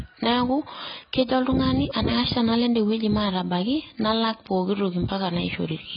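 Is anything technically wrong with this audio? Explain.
Yes. Throughout the speech there is heavy AAC compression damage, likely from AAC-LC coding at a very low bitrate, which fits about 16 kbps. Short of bits, the encoder discards everything above 5.1 kHz and coarsely quantises the rest, leaving the sound dull, smeared and warbling, with fizzy sibilants.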